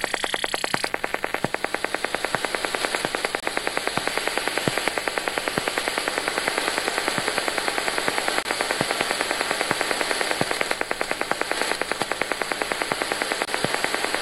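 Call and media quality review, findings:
Gap between chunks: 25 ms holes at 3.40–3.43 s, 8.43–8.45 s and 13.45–13.48 s, one after every 5.0 s chunk. Chunked transport or playback inserting silence at joins, from codec padding or a late-starting player. Unlike a dropout, nothing is lost; the sound resumes where it stopped.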